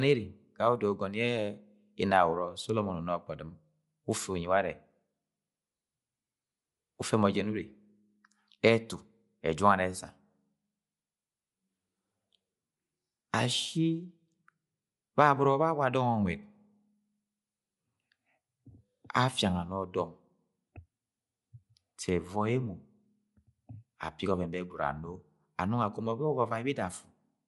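Speech, band-limited throughout with nothing above 11.5 kHz. The upper range sounds grainy and breathy, as if filled with noise. The codec damage is plainly audible. This likely comes from Bluetooth LC3 compression, which fits 10 ms frames at around 48 kbps.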